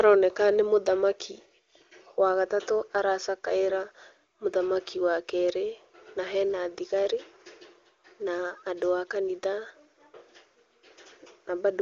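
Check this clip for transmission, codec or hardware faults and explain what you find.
No faults found in this clip.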